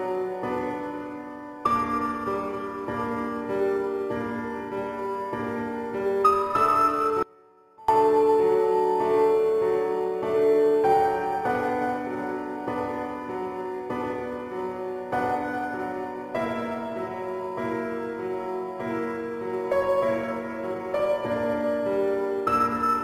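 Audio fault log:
7.23–7.88 s: audio dropout to a faint residue. The sound cuts out abruptly for about 0.66 s, leaving only a faint leak roughly 30 dB below normal level before returning mid-flow. The hard edges point to a brief loss of the signal feed, likely with the downstream path still live.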